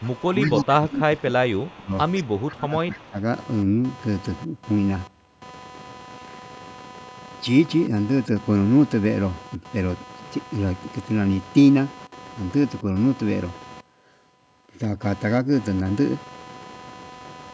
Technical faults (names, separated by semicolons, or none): computer activity noise; speech suppressed in double talk; echo leak